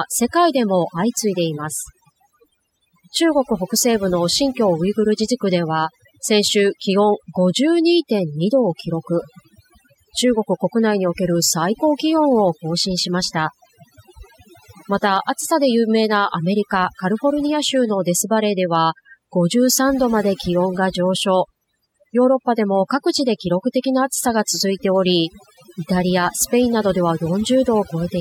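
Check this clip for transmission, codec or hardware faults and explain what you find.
The speech shows one fault: overdone noise removal, present throughout. Aggressive noise reduction cuts frequency bands near its noise estimate, leaving twinkling near-silence between phrases.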